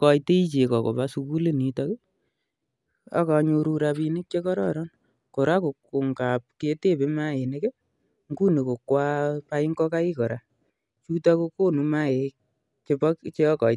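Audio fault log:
Nothing stood out on listening to this speech recording.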